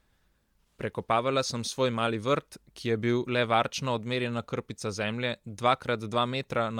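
Throughout the speech, a grainy, breathy hiss fills the upper band instead of a clean cutoff, likely Bluetooth LC3 compression, which fits roughly 48 kbps.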